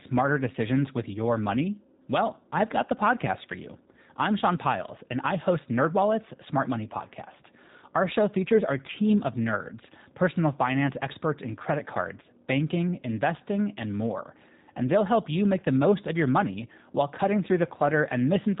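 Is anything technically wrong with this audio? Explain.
Yes. Throughout, the speech carries G.729 codec damage, and it is plainly audible. The codec models each short frame with a vocal tract filter, a pitch predictor and a few pulses. That makes voices rough and synthetic. Nothing passes above 3.8 kHz, which fits an 8 kbit/s G.729 link.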